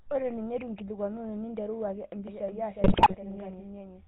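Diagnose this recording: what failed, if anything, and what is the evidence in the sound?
Codec stage: a GSM full-rate codec colours the whole clip. The speech is buzzy and gravelly and has nothing above 4 kHz, which fits a 13 kbps GSM encode.

Storage or editing stage: from 2.28 s to the end, a doubled audio track appears. A full-band copy about 5 dB quieter follows roughly 400 ms behind. It starts abruptly, likely from two out-of-step copies mixed together.

Network stage: GSM bit errors hit between 2.84 and 3.15 s. The speech breaks into squawks and gargling. Corrupted filter, pitch and gain values distort several consecutive decoder frames.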